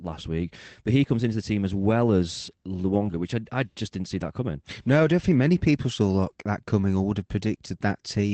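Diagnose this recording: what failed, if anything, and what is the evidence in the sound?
Lost packets rebuilt from error correction, at 0.37 to 0.39 s and at 2.85 to 3.11 s, in the network and codec stage of the call path. Neither spot has a gap. The first is a brief rough patch of about 20 ms. The second spans about 0.26 s and holds about 140 ms of rebuilt audio, which fits seven separate 20 ms packets, and those frames sound coarser and noisier. Each missing packet was replaced by the lower-bitrate copy carried in the next packet, and that copy was decoded in its place.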